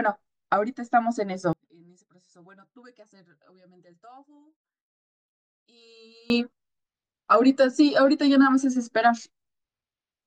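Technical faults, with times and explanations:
1.53–6.3 s, one channel inverted: the speech falls about 32 dB to a faint trace, likely because reversed polarity in one channel cancels the shared mono signal.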